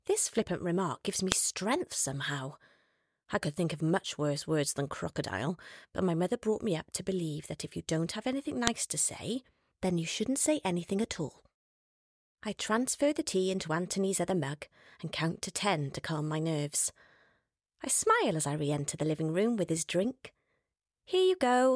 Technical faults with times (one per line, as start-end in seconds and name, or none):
1.32 file header played as audio
8.67 file header played as audio